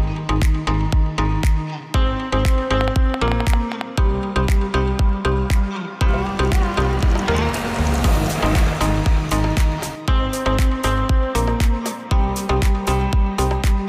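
From 2.81 to 3.82 s a train of clicks, around ten uneven pops about 15 dB above the sound, likely from interference, appears as thin vertical broadband spectrogram lines.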